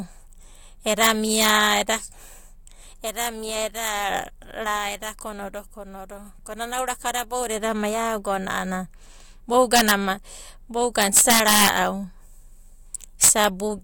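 Integer overflow in the speech's gain path lets peaks wrap to the opposite sign instead of limiting, causing violent cracks at 1.03–1.49, 9.76–9.91, 11.02–11.69 and 13.24–13.44 s.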